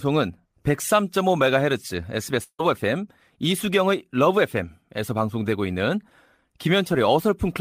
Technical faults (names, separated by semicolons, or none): long network dropout